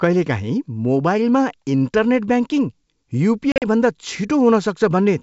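Packet loss on an ADPCM call strikes between 3.52 and 3.63 s: about 80 ms of packets vanish across 100 ms, longest gap 40 ms, and the decoder's predictor loses step. Speech cuts to hard-edged silence, then returns with brief distortion before settling.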